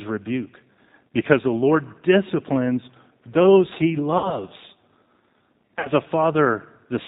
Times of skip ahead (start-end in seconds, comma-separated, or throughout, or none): none